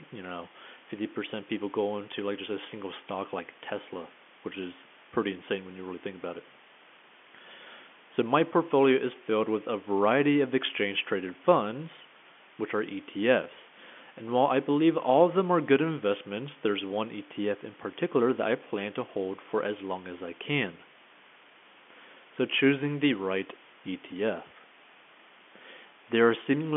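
A telephone-band speech recording carries low bit depth with dither from start to finish. A steady, even hiss sits roughly 20 dB below the voice, which fits a signal rounded to about 7 bits with dither added first, so the rounding error turns into plain white noise. The G.711 line's own faint quantisation noise tracks the speech level and stays far quieter. This hiss holds constant through pauses, and it lacks the gritty, level-dependent distortion of undithered truncation.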